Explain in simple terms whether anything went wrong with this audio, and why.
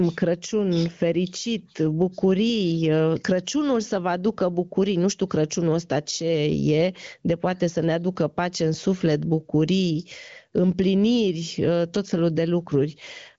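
Yes, something's off: there's gain pumping all the way through this speech. Loud and soft moments get squeezed closer together in level, so the sound comes across squashed. Likely cause: input gain set way too high, with a fast limiter clamping down. The wideband phone-call sound itself comes through clean.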